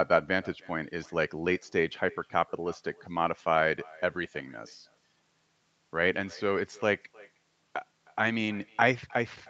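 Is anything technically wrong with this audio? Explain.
Yes. Throughout the speech, every phrase is trailed by a faint, thin copy of itself about a third of a second later, sitting about 24 dB below the direct sound. This is echo with no canceller. The far end played the call through a loudspeaker, its microphone picked that playback up again, and nothing subtracted it before it travelled back across the network. The round trip sets the delay. The loudspeaker and the return microphone account for the thin colour of the echo.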